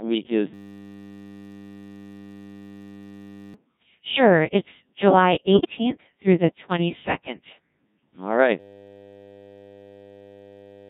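Codec 2 vocoder processing runs through the entire clip: the speech is rebuilt from sine waves driven by pitch, voicing and spectral envelope, leaving it heavily robotic and buzzy, consistent with about 1.6 kbit/s. A system hang loop begins at 0.54 s, just after "week is", and lasts until 3.54 s. The same 10 ms of audio repeats into a steady 100 Hz buzz while the system is frozen. The same hang loop returns at 8.6 s and buzzes through to the end. From 5.53 to 5.78 s, just before "through the", bit errors on digital voice radio corrupt a few vocoder frames, making the voice jump in pitch and level and warble into robotic gibberish.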